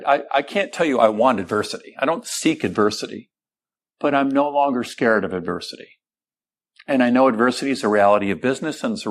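Nothing in this speech recording registers as a technical fault.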